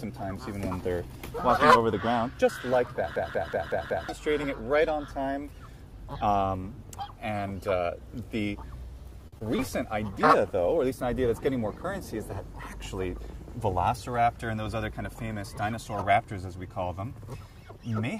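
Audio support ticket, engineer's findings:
System hang loop, 3.16–4.09 s. Machine-gun stutter, one 185.76 ms slice repeated five times at 5.38 Hz, which fits an 8192-sample ring buffer replayed while host/driver froze. Roughly a second of programme lost. Waveform: identical blocks tiled edge to edge. Spectrogram: same pattern stamped five times, vertical seams at each wrap.

Short stall from a late packet, 9.27–9.34 s. Sound held 50 ms too long, slight buzz, then resumes in place. Nothing lost; delay grows 50 ms. Jitter buffer underrun, last frame stretched. Spectrogram: harmonics frozen flat for 50 ms. Waveform: repeated periodic cycles, envelope dipping slightly.

Short concealed packet loss, 9.38 s and 9.56 s, about 20 ms each. Brief smear/wobble. Decoder missed ~20 ms per event, concealment extrapolated last sound then crossfaded back. Spectrogram: short smoothed patches, onsets softened. 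Waveform: small blended segments, smooth rejoin.

Call bitrate drop, 10.09–11.34 s. Rough, watery, duller audio. Bandwidth estimate fell; Opus encoder pushed from 64 to 24 kbps, at the floor for about 1.18 s, then recovers. Spectrogram: upper band thins and turns patchy, coarse blocky texture, clean return at 11.34 s.

Jitter buffer speed-up, 13.12–13.87 s. Audio runs about 5% fast, same pitch, slightly hurried. Excess buffered audio trimmed by repeatedly dropping pitch-period-sized pieces, roughly 40 ms total. Waveform: events arrive early versus the surrounding timeline. Spectrogram: harmonics unshifted, features compressed in time.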